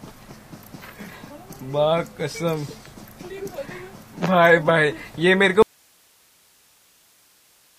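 At 5.62 s the sound cuts out abruptly and does not return, leaving only hiss through to the end of the clip. This is an audio dropout to a faint residue. The likely cause is that the wanted signal was lost while the path after the break stayed live, passing only its noise floor, around 40 dB below the earlier level. The waveform collapses to a thin band of noise, and the spectrogram shows a hard vertical edge with only faint broadband hiss after it.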